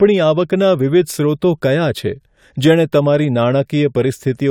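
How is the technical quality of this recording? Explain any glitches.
No glitches to explain: the speech recording shows no dropouts, clicks, distortion or timing faults anywhere.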